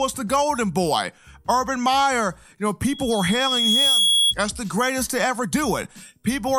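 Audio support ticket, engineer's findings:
Loudspeaker feedback squeal, 2.86 to 4.35 s. Single 3.3 kHz tone swelling over about a second to a few dB above the programme. Probable component: mic picking up its own loudspeaker, loop gain above unity at 3.3 kHz. Distinguishing point: unlike a steady interference whine or hum, the tone grows by itself from near silence and holds one pitch.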